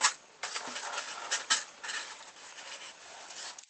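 Nothing is technically wrong with this audio; it has come through a call connection that is working as expected.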